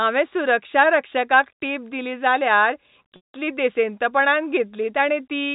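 Packet loss with pitch repetition hits this telephone-band speech at 3.16–3.29 s, just after "सुरक्षारक्षकाक टिप दिली जाल्यार": about 180 ms of audio went missing, and the receiver looped the last pitch period, fading it into silence before speech returns with a short cross-fade. The G.711 coding passes nothing above 4 kHz throughout.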